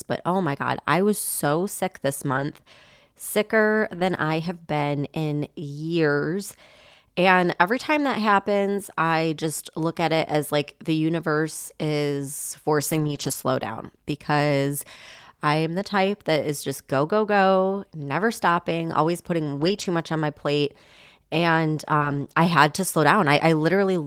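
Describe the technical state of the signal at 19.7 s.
Lost packet rebuilt from error correction, between 19.57 and 19.83 s, just after "never stopping always putting" and before "much on my plate". Several packets went missing here, but each following packet carried a low-bitrate backup copy, and the decoder played those copies instead. There is no silence or dropout, but the roughly 140 ms of rebuilt speech, consistent with about seven packets, sounds coarser and noisier than the surrounding audio.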